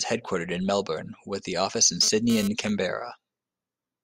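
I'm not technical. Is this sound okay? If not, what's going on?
No. There is GSM phone buzz from 2.03 to 2.48 seconds, just after "with offices in". It is a short, harsh, raspy buzz laid over the speech. An older 2G mobile phone nearby was sending data in quick radio bursts, about 217 times a second, and the recording equipment picked up those pulses and turned them into sound. Because the phone was sending data rather than holding a call, the buzz appears briefly and then stops.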